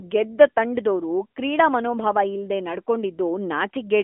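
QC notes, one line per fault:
Throughout, AMR narrowband mobile codec: the speech went through 8 kHz coding that rebuilds each 20 ms frame from a vocal-tract model and a few pulses. Nothing remains above 3.8 kHz, the band spans 250 Hz to 3.5 kHz, and plainly audible synthetic roughness fits a 10.2 kbps mode.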